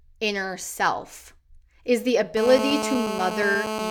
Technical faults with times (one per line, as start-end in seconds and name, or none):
2.37-3.91 GSM phone buzz